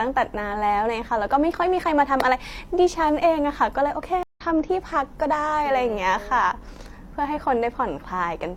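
A stream reconnect at 4.23 to 4.41 s: the connection dropped, leaving about 0.13 s of silence, and the player restarted its decoder mid-stream. The speech resumes roughly 150 ms further on, so a short stretch of speech is skipped across the gap.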